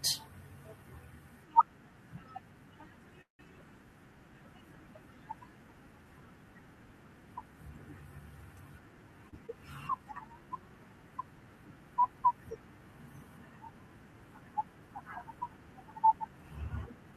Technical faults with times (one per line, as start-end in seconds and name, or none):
3.21-3.41 call audio freeze
9.29-9.34 short stall from a late packet
9.46-9.50 skip ahead
9.84-10.47 jitter buffer slow-down